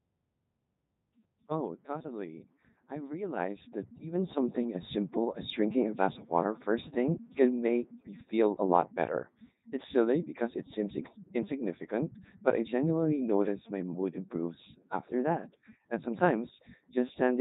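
Codec 2 vocoder, throughout: the speech is rebuilt from sine waves using only pitch, voicing and envelope, sounding robotic and buzzy, which fits its 3.2 kbit/s mode.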